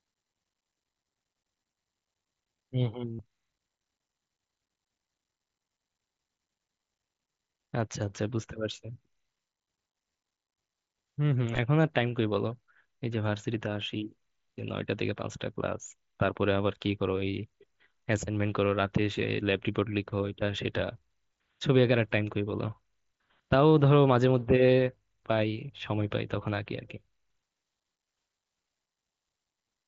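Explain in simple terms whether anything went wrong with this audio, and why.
Concealed Bluetooth headset packet loss appears at 3.13 to 3.20 s, a held buzzy tone lasting about 70 ms, and at 11.53 to 11.59 s, where brief scattered gaps are barely audible. Packets between the headset and phone were lost, and the receiving device patched each hole by repeating recent sound.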